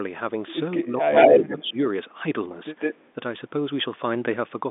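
From 0.8 to 1.13 s the speech sinks by up to around 15 dB. This is speech suppressed in double talk, likely caused by an echo canceller hearing both sides at once and turning everything down. The waveform envelope caves in there, and the upper harmonics thin out on the spectrogram.

Inside that dip, at 0.83 to 0.89 s, a very faint copy of the voice arrives 223 ms late. This is an echo leak, likely residue that a loudspeaker end's canceller failed to remove and sent back. On the spectrogram it is barely a ghost.

From 1.15 to 1.7 s a stronger echo leak follows, delayed 155 ms and louder than the direct speech. It shows as a second set of harmonic stripes shifted right. Overlapping it, from 1.36 to 1.78 s, the suppression returns with a dip of about 10 dB, and the waveform's envelope sinks.

From 2.79 to 3.07 s the 155 ms echo comes back at roughly the level of the speech itself. The spectrogram shows doubled, time-offset bands, all confined below about 3.6 kHz by the G.711 telephone coding.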